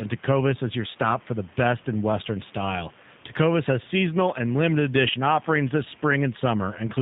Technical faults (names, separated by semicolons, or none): G.729 codec